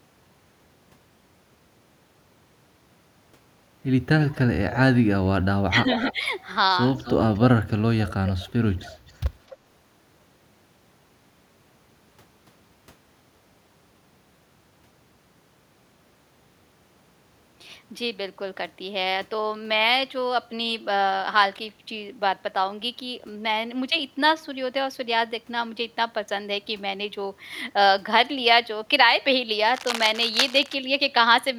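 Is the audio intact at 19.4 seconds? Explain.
Yes, the speech plays through cleanly at 19.4 seconds, with no dropout, click, distortion or other fault at that point.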